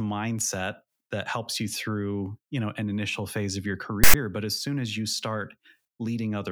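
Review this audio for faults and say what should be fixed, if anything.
At 4.04 to 4.14 s the speech is cut by file tags played as audio: tag text read as samples gives a loud, one-sided rasp, then zero padding drops to silence. Unlike a codec glitch or dropout, it has hard edges and ignores the surrounding signal. Have the decoder parse and skip metadata chunks rather than streaming them as sample data.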